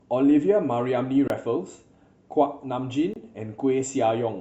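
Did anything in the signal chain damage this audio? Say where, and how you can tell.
Yes. The speech drops out abruptly twice, at 1.28 s and 3.14 s, each time for a 23 ms hole. These are blocks of digital silence: the driver or buffer stage missed its deadline, which fits a 1024-sample buffer.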